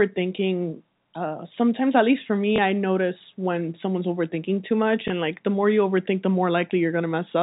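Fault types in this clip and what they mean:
Packet loss with last packet repeated: at 2.56 to 2.58 s and again at 5.08 to 5.10 s, a single 20 ms packet went missing, and the receiver filled each gap by playing the previous packet again. Because each loss is one packet rather than a run, there is no stutter at the packet rate. Each event is a brief blip where the repeated stretch is spliced in, heard within the band-limited G.711 telephone coding.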